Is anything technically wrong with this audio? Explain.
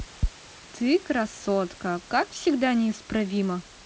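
No, nothing is wrong: the speech shows the expected wideband call-codec bandwidth with nothing above 8 kHz, and the room noise sits about 27 dB below it.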